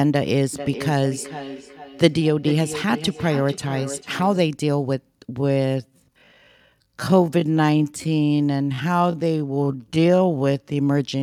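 From 0.53 to 4.49 s there is feedback echo between two devices. Each phrase returns roughly every 0.4 s, peaking about 12 dB below the speech. A second device is replaying this audio into the microphone, and the microphone's echo canceller cannot remove it.

From 5.34 to 10.76 s the pace abruptly drops to about 0.59 times normal while pitch holds steady. This is likely a time-stretched section, lengthened by repeating short pieces of audio.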